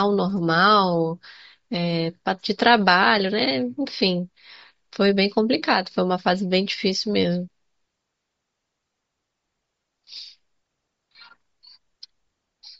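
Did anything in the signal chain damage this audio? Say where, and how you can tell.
Yes, at the codec stage, throughout the speech: Bluetooth LC3 compression, likely from a low bitrate of around 32 kbps. The upper spectrum is thinned and noise-filled, giving a breathy, grainy edge. A spectrogram shows a blotchy, smeared top band in 10 ms blocks.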